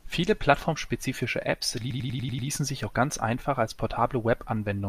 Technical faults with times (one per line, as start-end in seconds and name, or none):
1.90-2.48 repeated frames